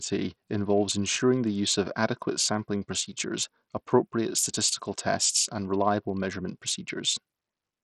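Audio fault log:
throughout, Bluetooth SBC compression: the speech treble flickers and drops out under gritty quantisation noise and aliasing, likely a starved SBC bit pool fitting about 64 kbps.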